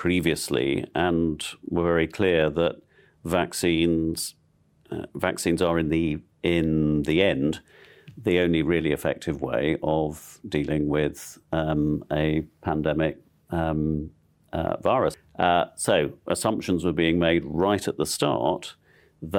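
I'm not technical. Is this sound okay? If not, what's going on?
Yes, this speech recording sounds fine, with nothing going wrong at any point. There's nothing here that needs fixing.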